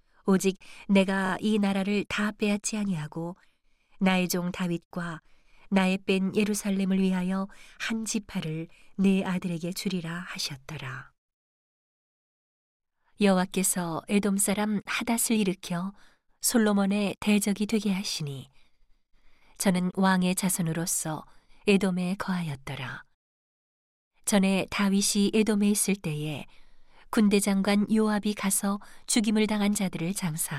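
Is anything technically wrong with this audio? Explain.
Yes. Repeated frames at 1.26–1.31 s: a 26 ms block, which fits a single compressed frame, plays twice more, adding 52 ms. It sounds like a stutter, with identical repeating slices on the waveform.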